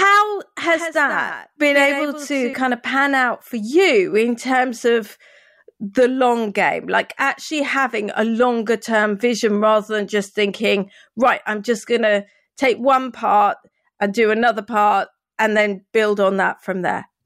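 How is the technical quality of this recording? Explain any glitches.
A doubled audio track affects the speech from 0.70 to 2.54 s, ending just before "of pan out for". A dry, full-band copy trails around 150 ms behind, roughly 10 dB quieter, and starts and stops abruptly. It's likely a second, slower capture path mixed in with the original.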